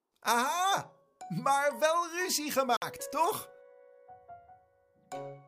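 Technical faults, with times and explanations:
2.77–2.82 s, Bluetooth stall: delayed packets likely let the headphone buffer run empty before the resent data arrived, so playback halted. The sound cuts to about 53 ms of silence, then resumes abruptly once the buffer refills.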